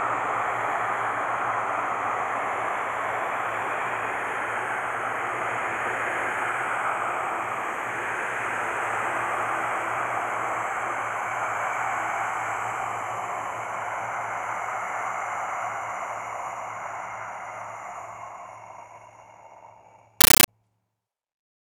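From 20.21 to 20.48 s, a compressed stream played as audio: an AC-3 bitstream, consistent with 640 kbps, is treated as raw samples. It sounds like chattering static. The waveform shows 13.3 ms noise bursts repeating 31.25 times a second, with broadband spectrogram stripes separated by silent gaps.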